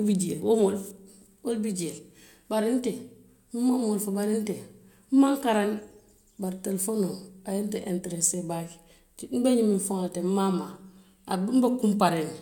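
No technical faults can be heard anywhere in the speech recording.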